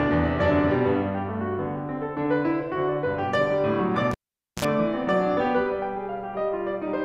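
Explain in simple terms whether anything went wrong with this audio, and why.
At 4.11 seconds the music is interrupted by a cable pulled and plugged in. A pop marks the moment the live lead comes out, and the music drops to near silence for about 0.48 seconds. As the plug goes back in, only its tip touches at first, so the line briefly picks up a 60 Hz mains buzz lasting about 55 milliseconds. A second pop follows as full contact is made, and the music returns at 4.65 seconds.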